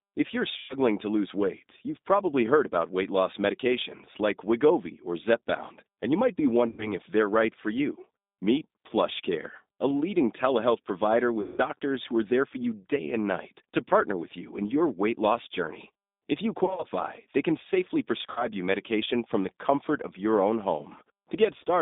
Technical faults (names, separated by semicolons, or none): G.729 codec; VoIP packet loss concealed by the speech codec